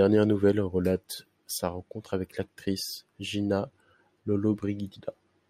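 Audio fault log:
No faults heard anywhere in this speech recording.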